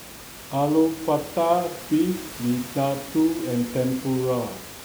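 Nothing stood out on listening to this speech recording; the room noise, about 16 dB below the speech, belongs to the space where it was recorded rather than to any fault in the system.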